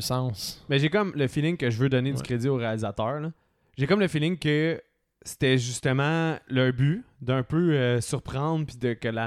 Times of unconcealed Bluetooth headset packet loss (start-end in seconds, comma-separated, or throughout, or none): none